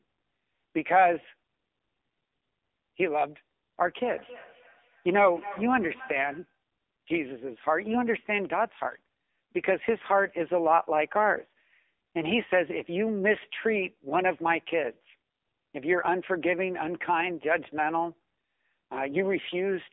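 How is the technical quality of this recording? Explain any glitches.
The recording has strong narrowband mobile-call quality throughout, with heavy codec damage across the whole speech clip.

From start to finish the voice sounds buzzy, thin and synthetic, with nothing above 3.6 kHz and a usable band of roughly 250 Hz to 3.6 kHz. This is the AMR narrowband mobile codec. AMR-NB does not store the waveform. It rebuilds speech from a vocal tract model, a pitch predictor and a few pulses per 5 ms subframe. At a low rate that artificial, heavily coded character comes through strongly, which fits AMR-NB at about 6.7 kbps.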